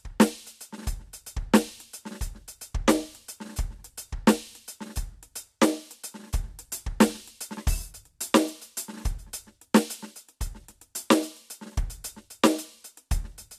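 No technical faults detected.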